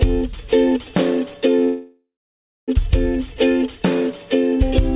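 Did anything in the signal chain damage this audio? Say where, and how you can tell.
Yes: a call audio freeze from 1.64 to 2.71 s. The sound trails into a fading buzz or hiss, goes silent for 0.59 s, then resumes intact, likely because network delay emptied the jitter buffer.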